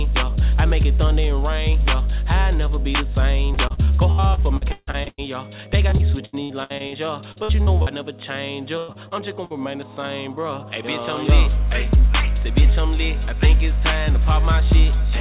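Choppy, robotic stretches with pieces of sound missing run from 3.54 to 5.20 s, 5.90 to 6.94 s, 7.32 to 7.88 s and 8.78 to 9.52 s. This is repeated packet loss: holes arrive in quick succession, the longest 151 ms in the first stretch, and each is patched by extending the last sound. Roughly 27 to 32 percent of each stretch is filled this way, all over a narrowband call path with nothing above 4 kHz, consistent with G.711.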